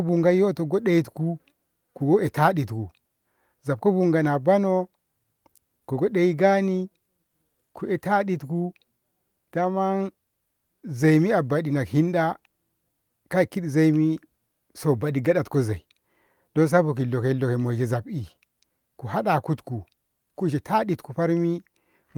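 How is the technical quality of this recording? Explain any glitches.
No technical faults are audible.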